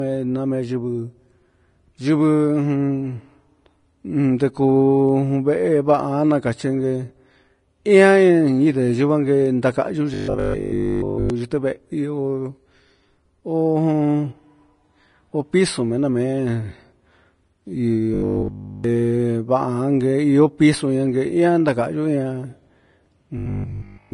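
Throughout the speech, nothing is present above 10.5 kHz, and the swirly, smeared texture of a low-bitrate encode persists even though the MP3 is high-bitrate. This is low-bitrate audio saved at a high bitrate, likely a much lower-bitrate original re-encoded. A native high-bitrate encode would extend well past that cut-off.

From 10.14 to 11.3 s, and again from 18.14 to 18.84 s, the speech turns into robotic sound from repeated short buffers: a rigid, metallic buzz at 50 Hz that roughly follows the syllables, likely because a 20 ms chunk is replayed while new audio is skipped. The third instance, from 23.38 s to the end, repeats most of its audio rather than all of it. The steady imposed pitch distinguishes it from stutter or dropouts.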